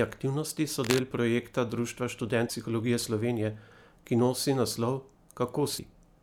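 From 0.84 to 1.02 s a dense, uneven scratching rustle sits over the speech, only slightly quieter than the speech itself. This is cable scratch noise, likely a worn cable, connector or control being moved, with its contact resistance fluctuating rapidly.

At 2.46 to 2.50 s and again at 5.75 to 5.79 s, a brief 40 ms glitch interrupts the speech. These point to damaged data in a compressed stream: the decoder misreads corrupted frames, loses sync and hunts for the next valid frame header.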